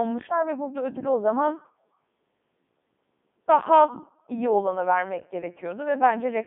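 Speech, passed throughout through the Codec 2 vocoder, heavily damaged. It sounds robotic and buzzy because the decoder rebuilds it from sine waves using only pitch, voicing, energy and envelope. The band sits near 200 Hz to 3.6 kHz, with nothing above 3.8 kHz. This fits the 3.2 kbit/s mode.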